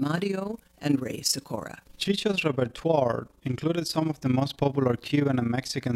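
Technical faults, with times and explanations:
Throughout: overlap-add ripple. The speech was split into windowed frames and rejoined with an overlap that fails to sum to constant gain, so level dips by about 11 dB roughly 30 times a second, giving a rough flutter. The waveform envelope shows regular scalloping; the spectrogram shows evenly spaced vertical banding.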